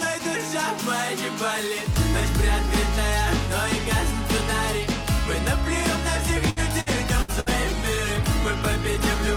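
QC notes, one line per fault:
6.50–7.49 s, repeated packet loss (robotic sound): choppy stutter with four short holes, the longest about 68 ms. Packets kept going missing, and each gap was patched by stretching the previous sound, so about a quarter of this second is smeared filler.
6.99 s to end, call bitrate drop: the sound turns coarse, watery and dull, losing its top end for the final 2.4 s. The encoder was likely starved of bandwidth, consistent with a fall from about 96 to about 15 kbps, forcing rougher coding and a lowered high-frequency cut-off.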